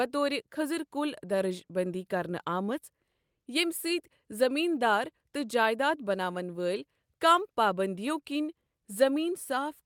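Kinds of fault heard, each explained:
No technical faults heard.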